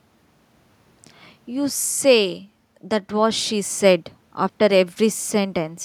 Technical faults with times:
none

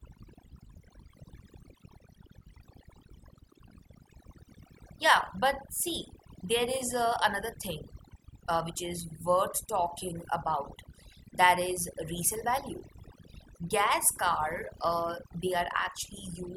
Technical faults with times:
0.00-16.57 overdone noise removal

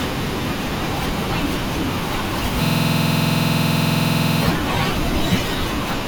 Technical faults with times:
2.65-4.41 system hang loop

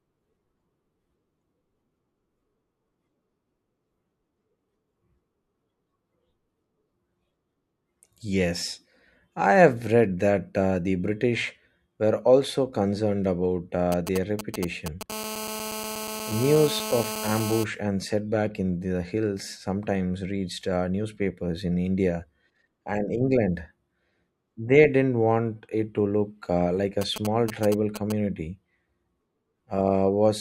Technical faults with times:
13.92-15.03 GSM signalling bursts
15.10-17.64 GSM phone buzz
27.01-28.12 GSM signalling bursts

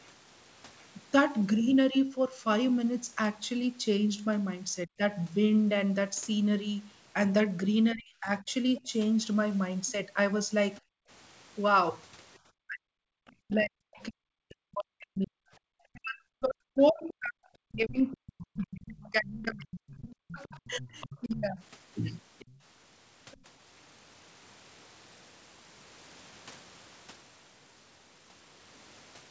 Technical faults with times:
4.87-5.01 speech suppressed in double talk
7.94-8.88 speech suppressed in double talk
8.77-8.81 other side's voice leaking through
9.87-10.81 other side's voice leaking through
10.81-11.09 background gated by the echo canceller
12.67-21.59 speech suppressed in double talk
17.08-18.56 other side's voice leaking through
19.64-23.37 other side's voice leaking through

